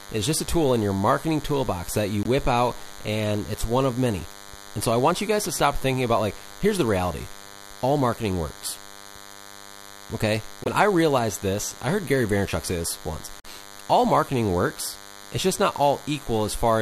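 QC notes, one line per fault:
Throughout: DECT cordless phone buzz. A thin, steady buzz sits under the speech the whole way through, roughly 20 dB below it. It repeats at 100 Hz and carries a long string of harmonics, which is why it sounds wiry rather than like a smooth hum. It's the signature of a DECT handset or base station nearby. Its short radio bursts every 10 ms get rectified in the audio circuitry and come out as buzz.
2.23 s, 10.64 s, 13.40 s: corrupt frame muted. Three abrupt holes cut into the speech, lasting about 42 ms, 42 ms and 66 ms. Each one drops straight to silence with no fade, and the speech resumes on time afterwards, so nothing gets shifted. That pattern fits damaged compressed frames being rejected by the decoder and replaced with silence, with the gap lengths matching a frame or two each.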